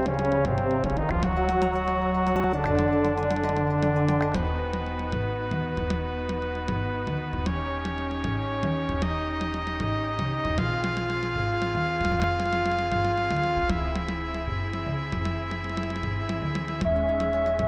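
Chunks out of order at 2.36–2.44 s and 12.12–12.24 s: a 40 ms block plays one, then two, blocks late, causing jumbled moments.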